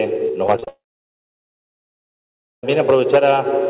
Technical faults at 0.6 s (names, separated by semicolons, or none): repeated packet loss (robotic sound); long network dropout